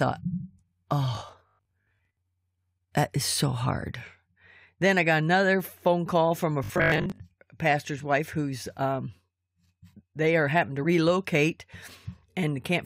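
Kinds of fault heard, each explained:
Robotic sound from repeated short buffers: New audio was likely reaching the player too slowly, so it kept looping the last 20 ms of sound while the real audio was skipped. That loop imposes a steady 50 Hz buzz, turning the speech metallic and mechanical between 1.15 and 2.17 s, with about half the material repeated, and again from 6.64 to 7.20 s, just after "phone call from a" and before "a pastor's wife who's", where most of it is repeated.
Damaged data in a compressed stream: A corrupted stretch of the compressed data left the decoder unable to read the frame there, so it lost sync and had to hunt for the next valid frame header. The result is a short glitch at 10.83 s, right after "they are having to", lasting only a fraction of a syllable before the decoder recovers and normal playback resumes.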